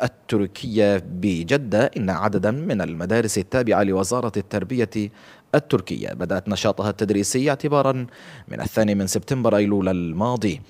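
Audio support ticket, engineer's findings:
No fault found in this audio; nothing to report for the ticket.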